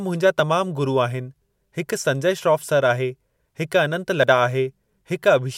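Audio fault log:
4.24 s, dropped buffer (overrun): the speech jumps ahead, losing roughly 30 ms, likely because the input buffer was overwritten before it was read. The waveform shows an abrupt discontinuity; the spectrogram shows a thin vertical broadband line with no gap.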